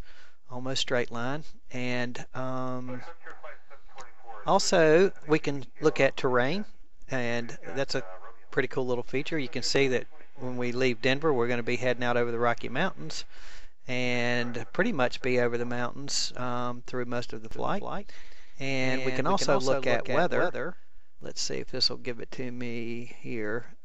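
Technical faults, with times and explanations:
17.51 to 21.21 s, doubled audio track: a dry, full-band copy trails about 200 ms behind at about 5 dB quieter, cutting in and out abruptly, likely from a slower second capture path.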